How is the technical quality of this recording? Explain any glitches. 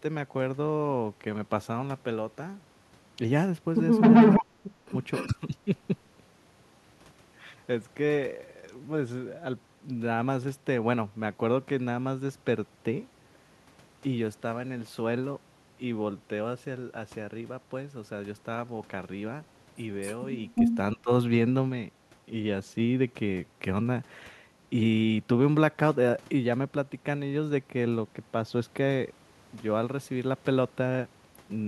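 The recording has two related call-processing glitches, both clustered around 4 to 6 seconds and again around 20 to 21 seconds.

Echo leak, at 4.01–4.44 s, 5.12–5.27 s, 20.0–20.24 s and 20.55–20.75 s: a delayed copy of the speech returns about 263 ms behind the original. The likely cause is a far-end loudspeaker whose echo canceller left part of its microphone pickup in the signal. The echo ranges from faint, well below the speech, to noticeably louder than it at 4.01 s and 20.55 s.

Speech suppressed in double talk, at 4.42–4.94 s, 5.27–5.68 s and 20.95–21.1 s: the speech dips sharply, by up to roughly 35 dB in the first stretch, and by roughly 15 dB and 20 dB in the later ones. It likely happens because both sides were sounding at once and the echo canceller could not tell the talker from the returning echo, so it attenuated everything. The result sounds like the speech briefly ducking or cutting out.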